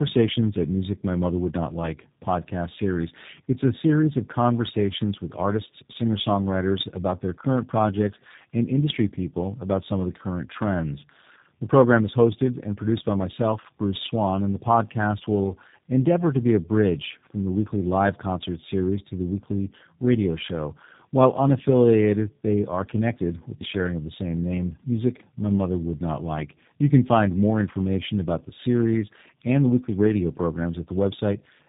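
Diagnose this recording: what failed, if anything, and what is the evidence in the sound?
Codec stage, throughout: tandem speech coding. The speech, capped near 3.8 kHz, sounds rougher and warblier than a single narrowband codec would, which fits three successive coders including G.729A.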